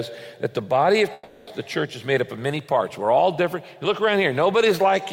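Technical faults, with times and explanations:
1.13–1.49 s, long network dropout: for about 0.34 s the sound becomes a fading buzz carried over from just before, likely from packets ceasing to arrive, and the missing stretch never returns. A spectrogram shows smeared, frozen bands decaying; the waveform shows a repetitive, shrinking envelope, then an abrupt restart.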